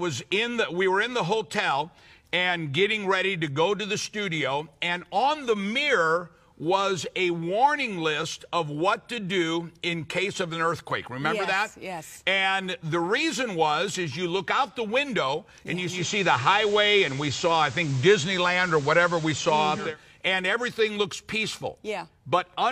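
At 15.85 s the audio cross-fades over about 234 ms to an FM broadcast of the same station, the classic sign of digital radio blending to analogue, and stays there until it blends back at 19.97 s. During that stretch the level shifts by about 4 dB, and hiss sits roughly 20 dB below the signal. The smooth blend, with FM hiss, distinguishes it from a codec bandwidth drop.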